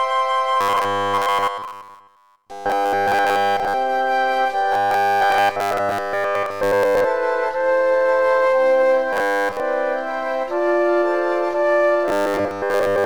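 Robotic sound from repeated short buffers shows up at 0.61 to 3.74 s, 4.72 to 7.04 s, 9.13 to 9.60 s and 12.08 to 13.05 s as a rigid 100 Hz metallic buzz. The likely cause is a 10 ms chunk looping while real audio is skipped, nearly all of it in the first three and most of it in the last.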